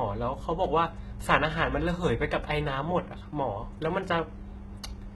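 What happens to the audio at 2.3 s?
HE-AAC compression is present at 2.3 s, as throughout: treble likely rebuilt by band replication at a very low bitrate near 16 kbps, leaving sibilants gritty and metallic.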